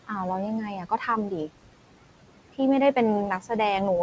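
Noise suppressor artifacts run through the whole speech clip. The suppressor pulls the room noise down by about 18 dB in the gaps, then lets it back up under the talking.

Speech cut by the noise suppressor happens at 0.76 to 1.08 s, and again at 3.4 to 3.5 s. The suppressor mistook quiet parts of the speech for noise and turned them down. That is about 150 ms in the first stretch and about 100 ms in the second. The deepest drops are about 12 dB and about 10 dB. Those bits sound swallowed and faint. The room noise sits about 15 dB below the speech, and the call path passes nothing above 8 kHz.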